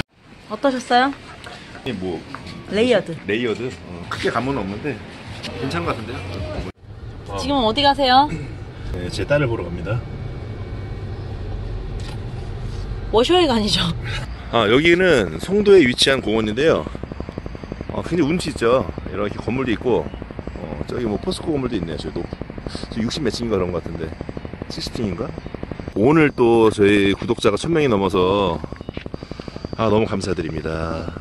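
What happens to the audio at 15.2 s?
A train of clicks is running at 15.2 s. It begins at 14.60 s and continues to 31.18 s, near the end of the clip. Evenly spaced pulses arrive about 11.9 times per second, roughly two hundred in all, each with much the same shape. They are likely from electrical interference or a faulty connection or power supply. The clicks stand out by about 10 dB over the signal and are heard as steady ticking across both the sound and its pauses.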